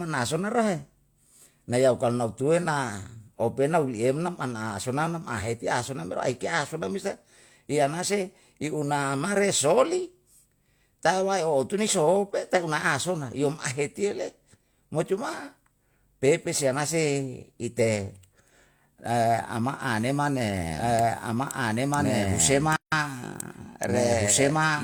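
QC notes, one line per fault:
20.76 s to end: doubled audio track. A second full-band copy of the speech enters abruptly and runs about two seconds behind, at roughly the same level. It has no decay or room colour. This likely comes from a second, slower capture path or misaligned edit.
22.76 to 22.92 s: gap at a join of encoded pieces. A 161 ms gap cuts into continuous speech, with edges smeared by the codec. The sound then resumes where it stopped, consistent with encoder delay and end padding left in at a join.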